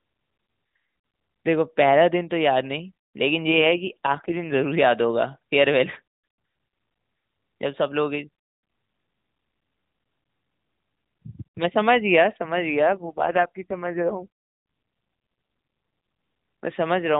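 At 3.50 to 4.66 s and again at 12.88 to 14.29 s, an AMR rate drop makes the speech rougher and buzzier, consistent with the codec falling from 12.2 to 4.75 kbps. A spectrogram shows no gap and the same 4 kHz ceiling, but blurrier harmonics.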